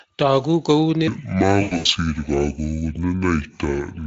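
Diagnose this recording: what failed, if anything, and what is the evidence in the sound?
From 1.08 s to the end, the speech runs at 0.625 times its proper speed, so it drops roughly seven semitones and slows together. This is a section at the wrong speed, likely a playback or clock-rate mismatch. A pure pitch shift would keep the tempo, but here both change at once.

Between 1.61 and 1.86 s, VoIP packet loss concealed by the speech codec leaves about 180 ms missing across 240 ms, with the longest gap 100 ms. The gaps are filled with a stretched, fading extrapolation rather than clean silence, which separates this network-stage fault from a plain dropout.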